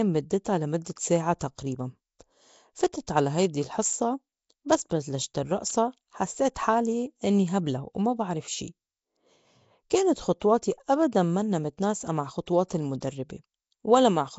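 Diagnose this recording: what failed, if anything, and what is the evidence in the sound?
The codec stage failed. A low-rate transform codec, likely Nellymoser Asao, has coded the speech throughout, and the damage is plainly audible. Nothing sounds above 7.7 kHz. A rough, hissy halo and a smeared, underwater character sit over the speech because quiet bands are given no bits and replaced with noise. The density of that coarse quantisation points to a rate around 32 kbps.

Pre-echo, also from the codec, appears at 2.93 s, just before "على هيدي الحصّة". The codec spread the quantisation noise sized for a sharp onset across the whole block, so it also fills the quiet instant before the attack. A brief hiss, about 10 ms long, leads into the onset, and the attack sounds softened and smeared.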